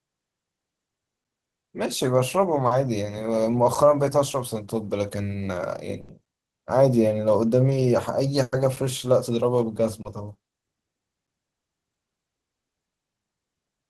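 A gap between chunks first appears at 1.24 s. It recurs at 3.75, 6.26, 8.76 and 11.27 s, every 2.5 s. The speech seems to have been delivered in 2.5-second pieces, with a playback restart or padding at each join leaving about 6.5 ms of dead silence. Nothing is lost, but each join is a tiny hard-edged hole, heard as a short dip at a steady rhythm.

Short concealed packet loss occurs at 2.67–2.72 s, covering 40 ms. Audio missing at the decoder was patched by extending the preceding sound, then crossfading back into the real signal, so this stretch comes across as a brief smear or wobble. The same happens more lightly at 7.70–7.72 s (10 ms) and at 10.02–10.06 s (30 ms).

A burst of packet loss hits at 6.01–6.10 s, with 80 ms gone. The receiver kept synthesising the last sound and let it decay, producing a held buzz or fading hiss before the speech picks up further along, with that span simply missing. 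A second burst at 8.42–8.53 s removes 100 ms in the same way, bridged by continuous concealment with no silent stretch.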